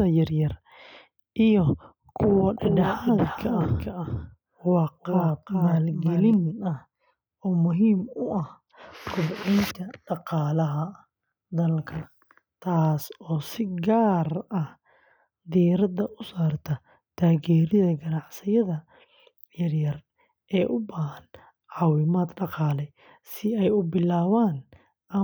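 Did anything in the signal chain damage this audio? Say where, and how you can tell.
Yes. From 2.58 to 6.34 s a doubled audio track appears. A full-band copy trails by roughly 0.4 s, about 5 dB quieter, with hard edges and no decay. Spectrograms show each syllable repeated and shifted right. The likely cause is a slower second capture path mixed in.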